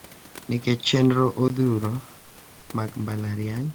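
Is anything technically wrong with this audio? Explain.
Yes. There are two faults in this speech clip.

From 0.0 s to 1.5 s, the sound is narrower and duller. Nothing reaches above 7.6 kHz. This is likely an input switched to a poorer device, such as another microphone or a headset's call profile. That device passes a narrower band. Its added noise sits well below the speech, and the level barely changes. At 1.5 s there is a short gap of about 20 ms. Then the fuller sound returns.

From 2.19 s to 2.35 s, about 160 ms of background is replaced. The real room noise, which sits about 27 dB below the speech, gives way to a smoother noise of a different tone. This noise is about 2 dB quieter. The likely cause is comfort noise in place of the background. The sender stopped transmitting during a pause, which points to Opus DTX. The receiver then filled the gap with synthetic noise shaped roughly like the room.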